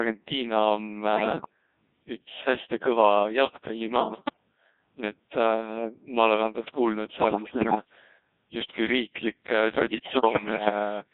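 Codec 2 vocoder damage runs heavily through the whole speech clip: the decoder rebuilds the voice from sine waves using only pitch, voicing, energy and envelope, so it sounds robotic and buzzy, which fits a rate around 1.6 kbit/s. Bit errors on digital voice radio strike at 1.16–1.49 s, 3.96–4.36 s, 7.20–7.85 s and 9.72–10.70 s. Flipped bits corrupt entire frames' pitch, level and spectrum, producing jumps, bleeps, warbles and robotic gibberish.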